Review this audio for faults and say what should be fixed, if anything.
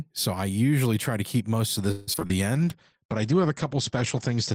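Repeated packet loss (robotic sound) runs from 1.91 to 2.32 s, starting right after "to keep most of". Packets kept going missing or arriving late, and six separate holes open in that span, the longest lasting 160 ms. The receiver patches each hole by extending the last sound it had. About 55% of the stretch is concealment rather than real audio, so it sounds choppy, with roughly 120 ms simply gone. Prevent it with forward error correction or redundancy and a steadier network path.

A jitter buffer slow-down follows from 2.32 to 2.99 s, as the receiver builds up its reserve. It does this by repeating single pitch periods and slivers of pause. Playback runs at 94% speed with the pitch unchanged, which stretches the sound out and adds 50 ms in total. This produces drawn-out syllables. Prevent it with a jitter buffer that adapts gradually and keeps enough reserve to absorb bursts without sudden catch-up.

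A call bitrate drop begins at 2.56 s and lasts to the end of the clip, with the lowest stretch about 1.75 s long. The bandwidth estimate collapsed and the encoder coded more coarsely. The sound points to a fall from roughly 32 kbps to 12 kbps. The top end is cut off at 8 kHz instead of reaching 20 kHz, so the speech turns muffled. Prevent it with smoother bandwidth estimation that does not overreact to short loss bursts.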